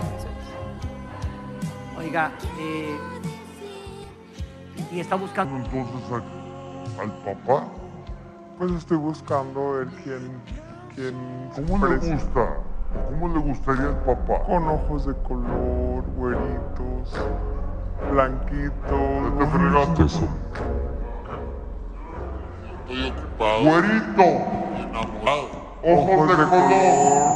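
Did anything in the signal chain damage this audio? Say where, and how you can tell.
Yes. At the codec or storage stage, whole compressed frames are dropped at 4.03 s, 20.97 s and 25.26 s. At each point the audio jumps forward, by roughly 100 ms at 4.03 s and 25.26 s and roughly 150 ms at 20.97 s. Those gaps fit a handful of frames of about 21.3 ms each. The waveform shows an abrupt change in content at each point.

From 5.45 s to the end, the section is at the wrong speed, running at 0.677 times its proper rate. Pitch drops by about seven semitones along with it, so everything sounds deeper and slower from that moment on. The likely cause is a playback or editing stage that treats this part against the wrong clock. On a spectrogram, every harmonic shifts downward and spacing tightens at 5.45 s. The waveform looks stretched out in time from there onward.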